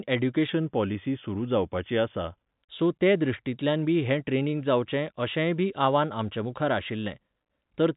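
A clock-matching stage likely made a drift correction step from 0.49 to 2.52 s, slowing playback by 5.4% to rebalance its buffer. The speech drops almost a semitone (about 97 cents) and drags, then snaps back just before "सो ते", all within audio band-limited to 4 kHz.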